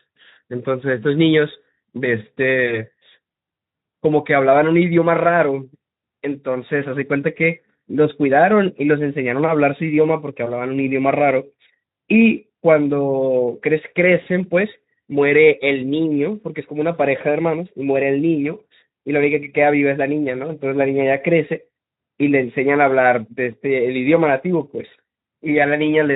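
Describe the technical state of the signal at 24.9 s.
A short smear replaces the speech from 24.87 to 24.91 s, the last sound stretched out and fading instead of clean syllables. This is VoIP packet loss concealed by the speech codec: about 20 ms of audio went missing, which fits a single lost frame. The Speex decoder, running at 15 kbps with only light coding damage around it, filled the gap by repeating its last pitch and spectral shape at falling gain. Because each decoded frame depends on the one before, the speech takes a moment to firm up after the gap ends.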